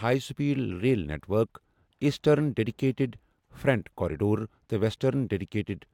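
No technical faults are audible.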